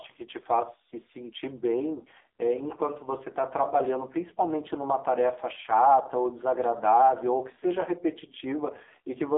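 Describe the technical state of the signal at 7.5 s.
At 7.5 s you're hearing the AMR narrowband mobile codec, which runs through the whole clip. The speech sits in a phone-line band of about 300 Hz to 3.7 kHz, with nothing above 3.8 kHz. The voice is rebuilt from a vocal-tract model excited by a few pulses per short subframe, and the damage is heavy, which fits one of the low modes around 6 kbps. That's why the voice comes across as buzzy, thin and noticeably synthetic.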